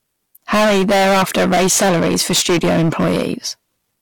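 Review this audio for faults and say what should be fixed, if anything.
Hard clipping runs through the whole speech clip. The signal was driven about 21 dB past what one stage could pass. Around a third of samples had their peaks cut flat. Those flat tops add high harmonics, heard as fuzz on every louder syllable. To prevent it, lower the gain before the overloaded stage so peaks stay within its range.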